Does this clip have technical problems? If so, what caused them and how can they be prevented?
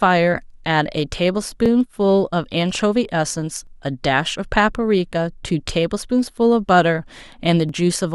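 Yes, there's a run of overlapping chunks: a short stutter or click at 1.66, 3.67, 5.68 and 7.69 s. The speech was handled in blocks of about 2 s, and each block starts a little before the previous one finished, so about 12 ms of audio plays twice at every join. That tiny doubled slice is the regular tick you hear. To prevent it, make sure each chunk starts exactly where the last one ended, or crossfade overlaps properly instead of simply appending them.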